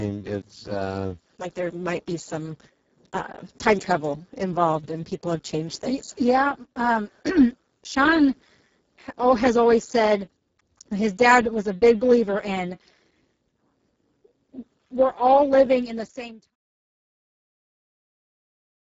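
Speex codec damage runs through the whole speech clip: the low-rate CELP coding has too few bits for the excitation, so the sound is hoarse, noisy and close to robotic, consistent with roughly 6 kbps. Nothing remains above 7.7 kHz, and the smooth fade out from about 15.5 s to 16.56 s carries the same roughness.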